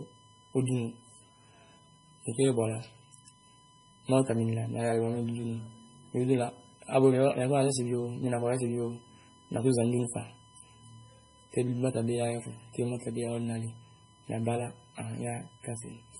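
A steady whine runs from the start to the end of the speech. Its pitch is fixed at 1 kHz, and that tone is the strongest part of it. This is USB whine. The USB bus draws current in regular 1 ms frames. That rhythm leaks into the audio through the power or ground lines. The result is a constant 1 kHz tone sitting roughly 30 dB below the speech.

The whole clip also shows heavy codec damage. Nothing is present above 10.6 kHz, so the treble is cut off flat. The speech sounds watery and swirly, with metallic chirps on s sounds and smeared attacks. The likely cause is MP3 compression at a very low bitrate, around 24 kbps. Short of bits, the encoder drops weak frequency lines, and they flicker on and off from frame to frame.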